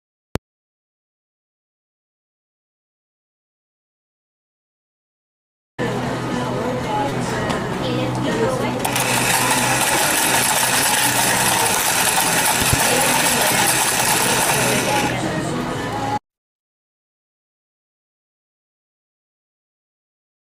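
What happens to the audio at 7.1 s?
A short concealed packet loss at 7.09–7.13 s: about 20 ms never arrived and was filled by extending the preceding sound, heard as a brief smear, seen as repeated waveform cycles and blurred spectral bands.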